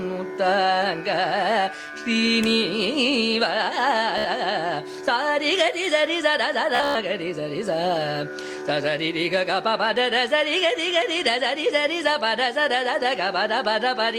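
Everyday sounds with two bursts of Bluetooth stutter, at 4.18–4.28 s and 6.75–6.96 s. Lost or late packets made the receiver replay a short buffer slice as a buzzing repeat. About 70 ms then 168 ms go missing, the second with runs up to 112 ms.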